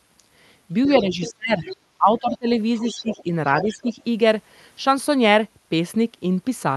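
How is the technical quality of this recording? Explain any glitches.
The recording has clear echo-cancellation trouble during the first four seconds. A second voice bleeds in behind the main speech, and the main speech dips as it does. The audio band tops out near 12 kHz, which fits an Opus call stream at around 48 kbps.

Other side's voice leaking through: A faint second voice appears at 0.85 to 1.33 s, 1.69 to 1.76 s, 2.19 to 2.38 s, 2.76 to 3.23 s and 3.6 to 3.76 s. It mostly sits about 15 dB under the speech, and drops to about 25 dB under at 2.19 s. The likely cause is a loudspeaker on the talker's device playing the far end back into the microphone, with the echo canceller leaving these scraps behind.

Speech suppressed in double talk: The main voice sinks from 1.01 to 2.47 s, where roughly a second of it is pushed down by as much as 30 dB. Shorter, shallower dips of about 10 dB follow at 2.8 to 3.26 s and 3.63 to 3.94 s. 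These dips coincide with the leaking voice. That points, likely, to the canceller failing to separate the talker from the echo while both were active, so it attenuated everything.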